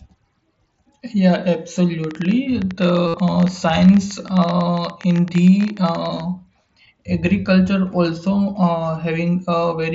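From 2.04 to 6.21 s a train of clicks runs, about 50 irregular pops near 13.7 per second peaking about 5 dB above the speech, likely from electrical interference; they show as thin vertical spikes on the waveform and full-band stripes on a spectrogram. At 3.07 to 3.14 s, concealed Bluetooth headset packet loss fills about 68 ms with a repeated buzzy fragment, seen as flat, evenly striated harmonics on the spectrogram.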